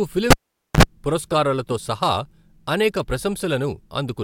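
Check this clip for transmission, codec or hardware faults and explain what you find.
One hardware fault is present: a cable pulled and plugged in, from 0.31 to 0.83 s, just before "పురస్కారాలతో సహా". A live lead is yanked out, giving a sharp pop as the speech vanishes into near silence for about 475 ms. On reinsertion the plug's tip touches first, picking up a roughly 59 ms burst of 50 Hz mains buzz before full contact closes with a second pop and the speech returns.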